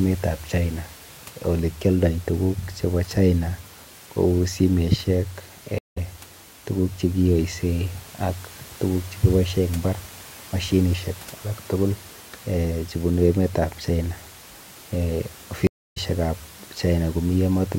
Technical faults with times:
5.78-5.98 stream reconnect
15.67-15.98 stream reconnect

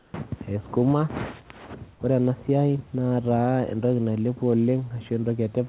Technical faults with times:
0.00-0.14 comfort noise in place of the background

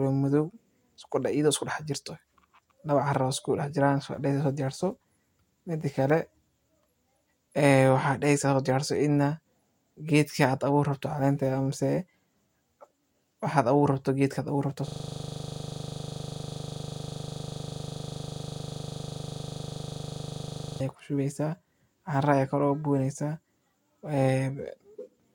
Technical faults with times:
14.88-20.81 system hang loop

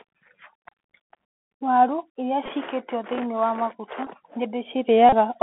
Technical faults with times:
0.00-5.42 Bluetooth CVSD headset codec
2.46 Bluetooth headset packet repeated
4.05-4.08 Bluetooth headset packet repeated
5.09-5.14 Bluetooth headset packet repeated

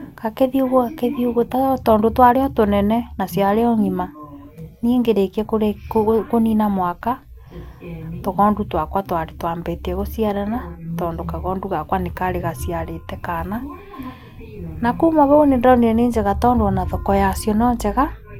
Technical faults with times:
none

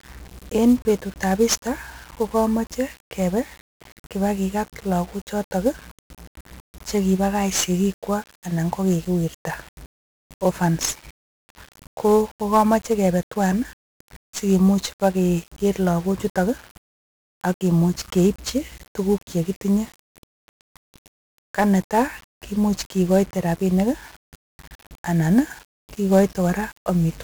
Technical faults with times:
0.00-27.24 1-bit DFPWM compression

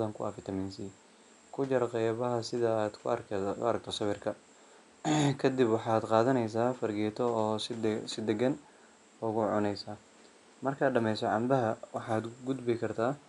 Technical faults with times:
none

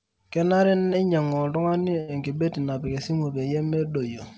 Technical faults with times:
0.78-1.25 repeated stalls (stutter)
1.69-2.10 short stall from a late packet

